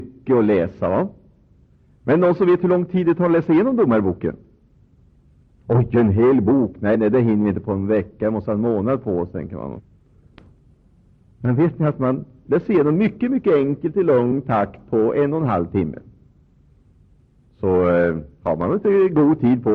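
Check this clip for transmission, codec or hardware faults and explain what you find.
Two brief smeared blips, at 6.94 s and 9.79 s, are where the audio lurches forward, losing roughly 30 ms at the first and around 150 ms at the second. Compressed frames were skipped: whole blocks of the coded stream were missing or rejected as damaged, so playback jumped ahead. The gaps fit one and about five frames of 26.1 ms. Because adjacent frames overlap, each join smears rather than clicking sharply.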